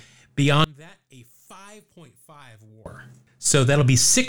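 One channel inverted, from 0.64 to 2.86 s in this speech clip: the level drops by about 28 dB, leaving a faint residue. This is likely because one stereo channel has reversed polarity, so the centred voice cancels when both channels are summed to mono.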